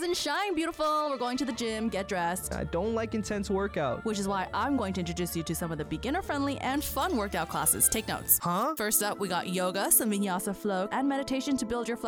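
From 6.74 to 10.25 s, pre-emphasis is left on: a treble boost matching the FM 75 µs curve was never undone, lifting 10 kHz about 13 dB relative to 1 kHz. The sound turns thin, bright and hissy, and a spectrogram shows that stretch's upper band glowing far hotter.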